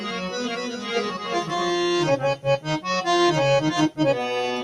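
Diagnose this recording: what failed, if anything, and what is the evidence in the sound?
A speech-tuned noise suppressor in the call processing stage is working on sound it was never meant for. Throughout the clip, onsets come through intact while sustained material and decaying tails are pulled down, with a gain swing of roughly 10 dB, so the sound pumps and thins. A codec starved of bits would smear or add swirly artefacts across the spectrum. Here only the level of steady content breathes.

From the start until 1.7 s there is a doubled audio track. A second, full-band copy trails the original by roughly 400 ms at about 5 dB lower, already running when the clip opens and cutting off abruptly at 1.7 s. A room echo or reverb would decay and carry colouration. This copy is dry, constant in level and stops cleanly. The likely cause is a second capture path or an edit that left two offset copies in the mix.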